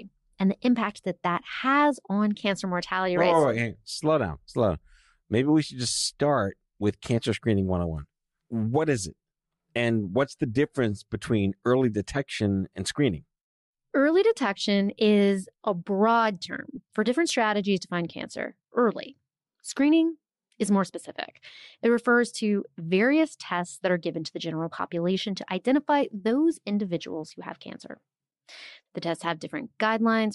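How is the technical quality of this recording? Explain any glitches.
The technical quality is compromised by codec damage that can plainly be heard for the whole clip, plus three brief dropouts.

Throughout, the upper spectrum has been stripped back and refilled with synthetic noise, most likely by Bluetooth LC3 compression. Its transform coder was starved of bits, so fine high-frequency detail was discarded and replaced with shaped noise. The speech carries a breathy, grainy edge, with a texture that fits roughly 48 kbps and short 7.5 ms frames.

At 12.39 s, from 16.75 to 16.78 s, and at 24.78 s, lost LE Audio frames interrupt the stream. The first and last gaps each match a single 7.5 ms frame, and the middle one is about twice as long. Each time, the decoder filled the gap by reusing the previous spectrum with scrambled signs. That turns the speech into a momentary noisy smear, a tiny rough blip rather than a clean silence.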